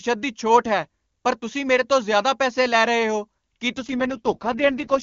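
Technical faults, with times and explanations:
3.76 s to the end of the clip, AMR rate drop: right after "ਲੈ ਰਹੇ ਹੋ ਕੀ" the speech turns rough, raspy and synthetic, with no gap and no loss of bandwidth. Up to that point the HD Voice sound is clean, consistent with the top AMR-WB rate near 23.85 kbit/s. The abrupt harshness points to the network forcing the codec down to its lowest mode, about 6.6 kbit/s, which leaves fewer bits for the vocal tract model and more for error protection.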